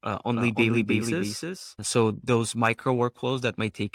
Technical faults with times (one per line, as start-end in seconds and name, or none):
0.35-2.11 doubled audio track